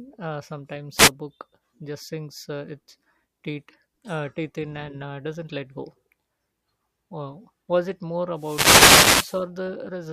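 At 0.96 to 1.10 s, just before "book just sinks uh", and again from 8.34 to 9.45 s after "was it more", wireless microphone noise hits as the FM radio link fades and receiver hiss swells into static. Spectrograms show broadband vertical smears; waveforms show fuzzy noise bursts.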